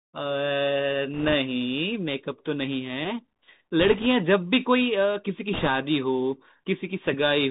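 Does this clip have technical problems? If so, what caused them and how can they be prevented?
Yes. The speech is band-limited by the Bluetooth CVSD headset codec, consistent with a 64 kbps CVSD link. Nothing above 4 kHz survives, s sounds are scratchy, and granular hiss sits underneath. Preventing it means using a wideband codec such as mSBC or LC3, or recording locally.

Bit errors on a Bluetooth voice link cause bursts of rushing crackle at 1.14–1.34 s, 3.80–4.06 s and 5.53–5.68 s. The third is harshest, with roughly a few percent of bits flipped. Improving radio conditions by reducing distance, obstructions and 2.4 GHz interference prevents them.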